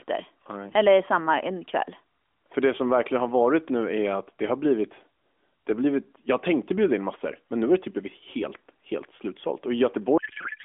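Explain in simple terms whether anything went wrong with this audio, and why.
From 10.18 s to the end at 10.65 s, the speech turns into garbled noise and warble. This is a codec payload misread: the receiver unpacked the mobile AMR audio with the wrong bit layout, so every field landed in the wrong place.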